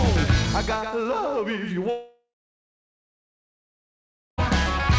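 From 1.90 s to 4.40 s the sound breaks off, most likely from a long network dropout. The last sound is stretched into a fading buzz, then about 2.1 s of silence follows, and playback resumes with roughly 2.5 s missing. A brief packet-loss glitch would be patched over almost seamlessly. Here the concealment dies away into a long gap instead. Throughout the clip nothing is present above 8 kHz, which fits a G.722 call path.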